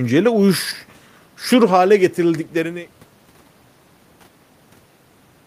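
No faults; the speech fades out smoothly from around 2 s to 3.1 s, an ordinary editorial fade with no hard edge.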